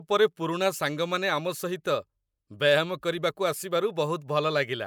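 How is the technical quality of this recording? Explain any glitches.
No glitches or technical faults can be heard anywhere in the recording.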